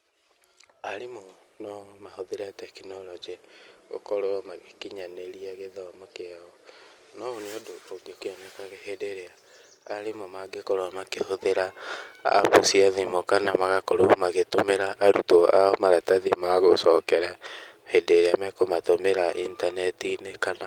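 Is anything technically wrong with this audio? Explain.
Yes. There are two faults: a skip ahead and jitter buffer speed-up.

Skip ahead at 8.21 s, right after "no ũũ nĩ ũndũ". Roughly 0.4 s of speech is missing. That stretch was discarded in transit or by an overflowing jitter buffer while later audio was already queued. Nothing fills the hole, so the two sides of the cut butt together almost directly. The result is an abrupt jump forward in the speech, with part of the utterance simply absent.

Jitter buffer speed-up from 8.59 to 9.11 s at about 107% speed, and again from 9.77 to 10.72 s at about 110%. The buffer was holding more audio than its target, so the receiver repeatedly trimmed short pitch-period segments to bring the delay back down. Roughly 40 ms and 100 ms were removed. Pitch stays the same but the delivery is noticeably quicker and sounds hurried.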